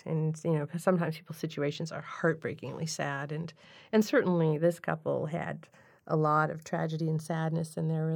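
Speech with channels drifting apart throughout: two devices on separate clocks, off by roughly 50 ppm, so the tiny delay slides and the mono fold-down sweeps like slow flanging.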